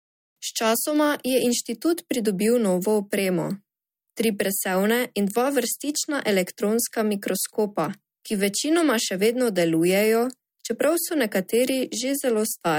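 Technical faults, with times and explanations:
No technical faults can be heard anywhere in the speech. There is nothing here to time or explain.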